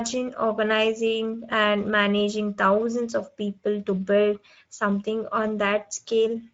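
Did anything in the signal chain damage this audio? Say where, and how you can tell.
Yes, at the codec: the speech is hoarse and grainy throughout, with hissy upper frequencies. That is the Speex codec starving its excitation, which fits roughly 17 kbps. Being steady, it is not packet loss.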